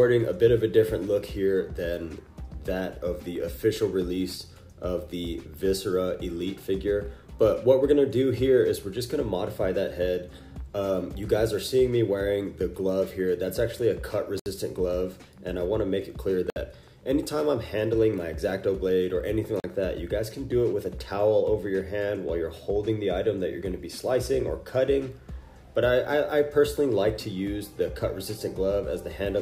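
Three short holes break the sound at 14.40 s (about 65 ms), 16.50 s (60 ms) and 19.60 s (40 ms). Each is a block of digital silence: the sound drops to silence and back without any fade, as when the output buffer isn't filled in time.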